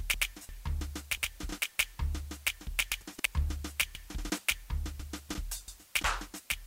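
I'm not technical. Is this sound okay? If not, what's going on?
No, there's a steady, even hiss under the music from start to finish. That's low bit depth with dither: the music is stored with very few steps, which points to about 8 bits, and a little added noise smooths the rounding into a fairly loud, constant hiss instead of distortion.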